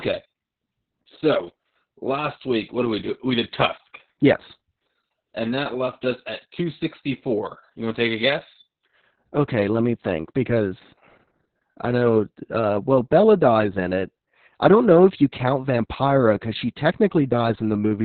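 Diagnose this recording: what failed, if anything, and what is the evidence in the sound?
Codec stage: heavy Opus voice compression throughout. The speech is muffled, hoarse and slightly robotic. A spectrogram shows nothing above 4.4 kHz. The linear-prediction coder has fallen back to narrowband and is coding the excitation coarsely, which fits a bitrate of about 6 kbps.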